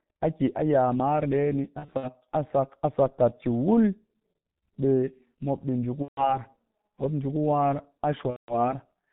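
From start to finish the speech carries heavy G.723.1 codec damage, consistent with a low-rate telephony coder running at about 6.3 kbit/s. Nothing survives above 4 kHz, so the spectrogram shows a hard ceiling with a bare band above it. Because the coder refreshes its voice model only every 30 ms, consonants smear into neighbouring sounds and the voice comes across muffled and hoarse, with smudged formant tracks instead of crisp transients.

VoIP packet loss concealed by the speech codec then breaks in three times. From 1.79 to 2.10 s, about 120 ms is missing in scattered gaps across roughly 240 ms, the longest lasting 60 ms. From 6.02 to 6.39 s about 150 ms is lost, and from 8.30 to 8.73 s about 180 ms. Each time the decoder repeats its last pitch and filter at falling gain, so the sound stretches into a fading buzzy tone or coloured noise. A spectrogram shows a frozen, repeating spectral pattern over a decaying waveform envelope, with weak, distorted speech lingering just after each gap.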